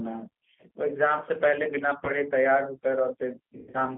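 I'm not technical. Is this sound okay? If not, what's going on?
No. G.729 codec, throughout: the speech has been squeezed through a phone-call compression system that rebuilds the voice from a rough model of how it was made, rather than sending the actual sound. That makes it slightly rough and artificial, and everything above ordinary telephone range is missing, so it sounds thin and muffled.

VoIP packet loss concealed by the speech codec, at 2.05 to 2.10 s: a small chunk of the call, about 20 ms, never arrived. The decoder covered the hole by stretching out what it had just heard. This leaves a brief, stretched moment.

The same packet loss concealment happens more heavily at 3.58 to 3.82 s. About 140 ms went missing in several gaps over roughly a fifth of a second, the longest about a tenth of a second. The voice turns into a fading, stretched sound and stays weak and distorted for a moment after.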